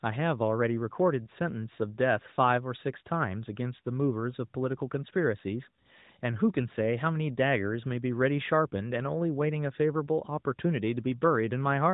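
No faults are present; the speech carries the expected narrowband mobile-codec character, with nothing above 4 kHz and only light coding texture, consistent with AMR-NB running at its top 12.2 kbps mode.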